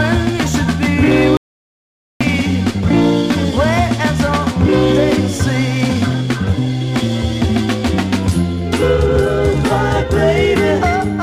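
At 1.37 s the sound cuts out abruptly, and it returns at 2.21 s. This is an audio dropout to silence. The gap lasts about 0.84 s and holds silence, with no room tone. The input was likely lost while recording continued.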